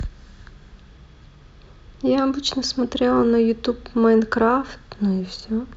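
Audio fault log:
Nothing to log here, this speech clip has no faults to report.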